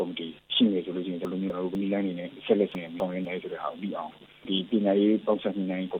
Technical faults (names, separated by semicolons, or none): chunks out of order